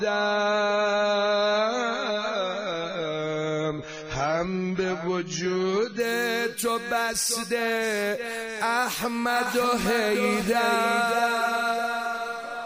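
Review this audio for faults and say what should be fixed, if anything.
For the first 6.0 seconds the audio sounds dull and smeared, with nothing above 7 kHz and strong codec artefacts. At 6.0 s the quality jumps up with no gap. This is an adaptive stream starting at a low bitrate: the player began on a cheap rendition, consistent with something near 16 kbit/s AAC, then stepped up after measuring the connection. To prevent it, start playback on a higher rendition or buffer briefly before choosing one.

From 9.35 s to the end, a second full-band copy of the sound trails roughly 0.7 seconds behind, about 5 dB quieter. It is dry, with no decay or room colour, and starts abruptly. This doubled audio track is likely caused by a slower second capture path or an edit leaving two offset copies. To prevent it, mute or remove the duplicate source so only one path reaches the mix.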